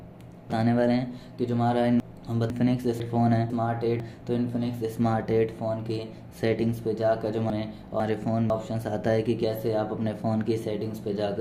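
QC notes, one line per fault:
0.5–2.5 s, 3.0–4.0 s, 7.5–8.5 s: chunks out of order. A 500 ms block plays after blocks that should follow it, three blocks late in the first span and one block late in the other two. Each span sounds briefly jumbled, with three hard joins around each misplaced block.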